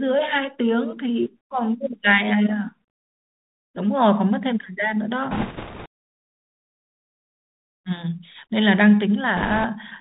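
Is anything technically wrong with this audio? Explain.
Yes. The whole recording passed through the Bluetooth CVSD headset codec. It sends one up-or-down bit per sample, which fits a 64 kbit/s stream. Nothing above 4 kHz passes, and the adaptive step can't keep pace with loud high content, so sibilants turn scratchy, and a plainly audible granular hiss runs underneath.

Bit errors on a Bluetooth voice link strike at 5.31 to 5.87 s, with roughly 7 percent of bits flipped, and again at 9.37 to 9.65 s, at around 3 percent. Each wrong bit nudges the waveform only slightly, so there are no sharp clicks. Instead a rushing crackle rises over the speech, heavier in the first stretch.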